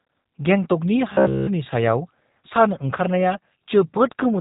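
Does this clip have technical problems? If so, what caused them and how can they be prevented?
Yes. Throughout, the speech sounds rough and synthetic with nothing above 3.8 kHz, the sound of the G.729 codec rebuilding speech from a vocal tract model at a rate that fits 8 kbit/s. Using a wideband, higher-bitrate codec would prevent this.

From 1.13 to 1.47 s the speech collapses into a rigid, metallic 66.8 Hz buzz. This is robotic sound from repeated short buffers, likely one 15 ms block replayed throughout while the real audio was skipped. Larger jitter buffers and steady audio delivery would prevent this.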